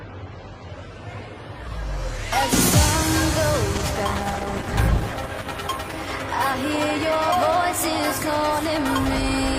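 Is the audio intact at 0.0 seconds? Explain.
Yes, the audio is intact at 0.0 seconds, with no fault present at that moment.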